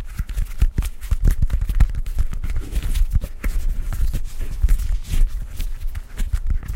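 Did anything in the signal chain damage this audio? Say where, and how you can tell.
No, nothing along the way seems to have harmed this one; it comes through sounding just as it should, with no stage of the chain leaving a mark you can hear.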